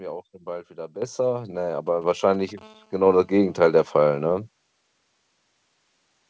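At 1.02 s, just after "auch dann bald wieder", the speech and the background jump up together by about 9 dB in a single step, with no fade. This is a microphone volume step-up. The call software judged the input too quiet and raised the device's input gain all at once, so everything the microphone picks up gets louder at the same instant.

From 1.87 s to 2.59 s a galloping dit-dit-dit of short buzzes runs under the speech, at roughly 25 dB below it. These are GSM signalling bursts. A nearby 2G phone is exchanging brief groups of radio bursts with the network, as happens before a call or text arrives. The audio circuitry rectifies those pulses, and each group comes through as a clipped buzz at a 217 Hz rate.

Inside that stretch, at 2.04 s, the microphone volume steps up again, this time by about 4 dB. Once more the speech and background rise together, because the software raised the input gain a second time.

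At 2.61 s, right after the bursts stop, the GSM phone buzz takes over. It is a steady, raspy 217 Hz buzz full of harmonics, about 35 dB below the speech, and it lasts until 4.32 s. The phone has moved into an active call and now transmits 217 bursts a second without a break, and the rectified pulses form a continuous tone that has nothing to do with the speech.

Throughout the clip the audio has no content above 8 kHz, which fits a wideband call codec such as G.722 on the call path.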